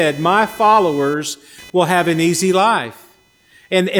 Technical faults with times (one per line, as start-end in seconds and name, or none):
0.00-4.00 computer activity noise